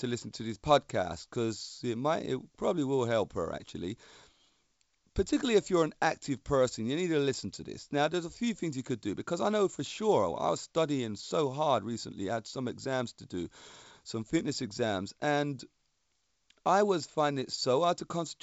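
Speech comes through with the wideband telephone coding of G.722 at 64 kbit/s, the band that runs out above 7.7 kHz fitting that codec's normal wideband limit, with no technical fault to report.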